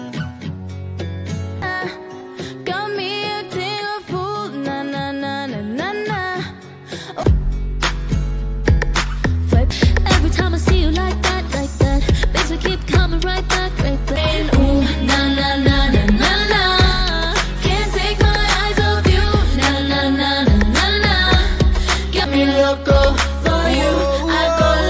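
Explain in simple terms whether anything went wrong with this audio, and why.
Nothing went wrong here, so there's no problem to explain and the audio can be heard just as it was captured.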